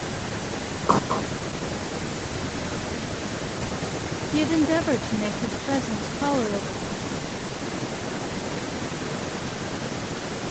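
Speech with echo with no canceller throughout: a thinner copy trails each phrase by about a fifth of a second, about 8 dB down, seen on a waveform or spectrogram as quieter repeated shapes behind every burst, all cut off at 8 kHz by the call path.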